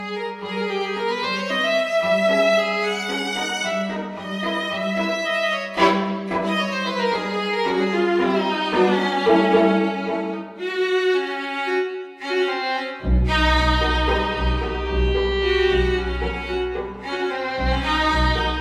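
Nothing stood out on listening; no technical fault could be heard anywhere in the audio.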